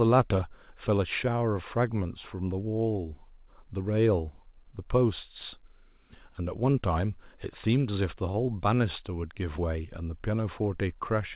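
Speech heard through a narrowband call path, empty above 4 kHz, which fits G.711 A-law. From 8.32 to 8.47 s, a short stall from a late packet holds the preceding sound for about 21 ms without losing anything. On a spectrogram this shows as briefly frozen, smeared harmonics, and the waveform shows a repeated-looking stretch.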